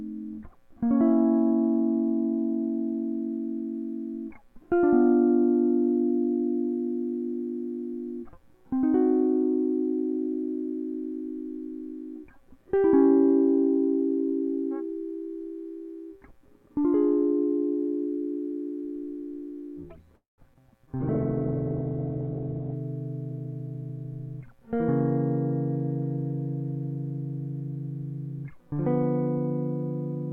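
At 20.15 s the music hangs on its last sound, which smears into a fading buzz and then drops to silence for about 150 ms. It picks up again at 20.41 s exactly where it left off, so nothing is lost, but the whole thing now runs about 225 ms late. That's a call audio freeze, likely from packets getting held up in transit until the jitter buffer ran dry.

Right after, there are two bits of short concealed packet loss, at 20.54 s and 20.87 s. Each drops 40 ms of music, and the receiver patches over it with almost nothing before blending back in. You hear a quick smear or wobble, and each one claws back some of the delay the freeze added.

From 21.00 s to 22.84 s there's a call bitrate drop. The encoder falls from 96 kbps to 7 kbps and sits at the bottom for about 1.76 s. The audio band shrinks from 20 kHz to 4 kHz, so the music turns muffled and rough.

Then from 23.31 s to 24.60 s a jitter buffer speed-up trims about 150 ms of backlog by cutting tiny pitch-period slices. 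Playback runs at 109% with the pitch unchanged, so the tempo briefly rushes.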